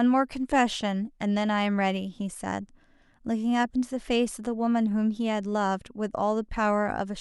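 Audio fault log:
No faults are audible in this speech clip.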